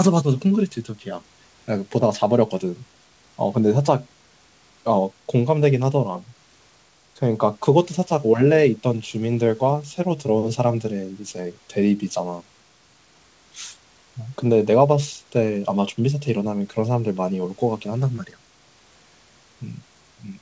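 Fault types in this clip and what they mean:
No technical faults can be heard in the recording. The call path leaves nothing above 8 kHz, which fits a wideband codec such as G.722, and the room's background noise sits about 41 dB below the speech.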